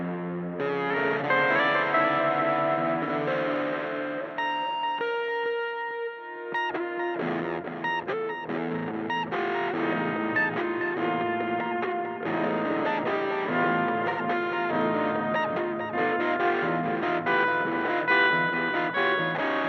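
From 0.56 s to 19.31 s, faint single-sample ticks recur at a steady rhythm of roughly one every 0.7 s, around thirty in all. These are clock slip clicks, likely from two devices on free-running clocks drifting apart by something on the order of 30 ppm, so a sample is dropped or doubled each time the error reaches a whole sample. Their metronomic regularity separates them from random digital clicks or dropouts.

At 3.04 s, a brief patch of about 43 ms turns smeared and noisy rather than ticking or going silent. This is AAC frame loss with concealment: the decoder had nothing to play and rebuilt the gap from the last good spectrum. The length fits one lost frame. A longer patch of about 85 ms follows at 14.09 s, consistent with two consecutive lost frames. Unlike the clock slips, these are smeared patches of sound, not instantaneous ticks, and they don't recur on any rhythm.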